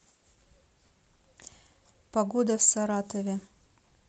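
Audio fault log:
No faults can be heard in this speech recording. There is nothing to log.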